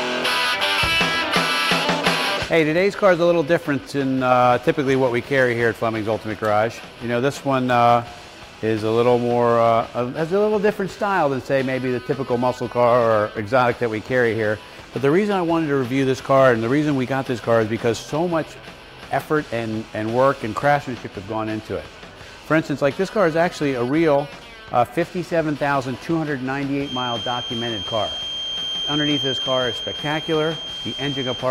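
From 26.78 s to the end, a thin, steady feedback whistle at 3.2 kHz sits roughly 10 dB under the sound, swelling and fading slowly. The likely cause is a loudspeaker-to-microphone loop hovering at the edge of feedback. A spectrogram shows one narrow horizontal line.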